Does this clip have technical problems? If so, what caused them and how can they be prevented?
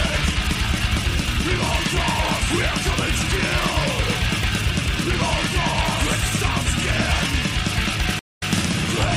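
Yes. At 8.19 s the sound cuts to silence for 157 ms, and when it returns the passage jumps back, replaying the 157 ms heard just before the gap, with the fault spanning up to 8.51 s. This is a stream reconnect: the connection broke, the player reconnected and started a fresh decoder mid-stream, and the server resent a short stretch of audio. A larger client buffer, plus resuming from the exact last received position, would prevent both the dropout and the repeat.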